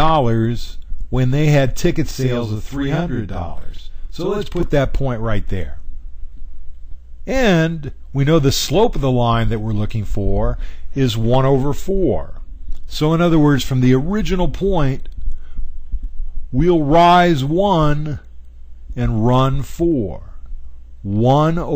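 From 2.11 to 4.63 s, one channel runs about 46 ms late, which fits a 2048-sample buffer, and the two channels are then summed to mono. The late copy arrives at full level as channel delay (doubling), heard as a distinct slapback echo trailing the sound.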